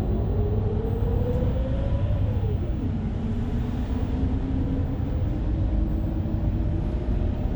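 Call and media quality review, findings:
Doubled audio track, 0.00–1.52 s, already present when the clip opens. Second full-band copy trails the original by about 300 ms at roughly equal level. Likely a second capture path or an edit leaving two misaligned copies mixed together. Unlike acoustic echo or reverb: single repeat, no decay tail, no room colouring, no progressive loss of highs. Copy stops abruptly at 1.52 s rather than fading, so this is a parallel stream, not reflection.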